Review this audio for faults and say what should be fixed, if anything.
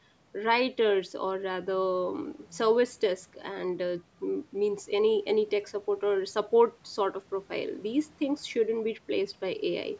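No faults found; nothing needs fixing.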